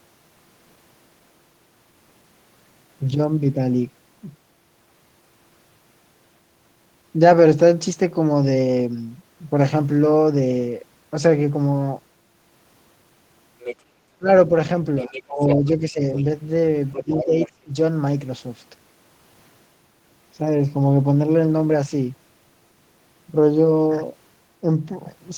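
Other side's voice leaking through first appears at 13.59 to 13.76 s: a second voice, roughly 10 dB below the main speech, sits under the talker. It is likely loudspeaker playback of the far end picked up by the microphone and not fully cancelled. The leak returns at 14.98 to 15.68 s, at 16.15 to 16.22 s, where it is quieter, around 15 dB down, and at 16.92 to 17.51 s.

Speech suppressed in double talk starts at 14.18 to 14.52 s. The talker's level suddenly sags, by as much as about 20 dB, and parts of about 150 ms of speech drop away. Both ends were likely speaking at once, and the echo canceller, unable to separate the local voice from the echo, turned everything down. It happens again at 15.03 to 16.03 s, over about half a second, and at 16.98 to 17.72 s. Both stretches overlap the leakage, so the talker fades or cuts out in pieces while the far voice bleeds through.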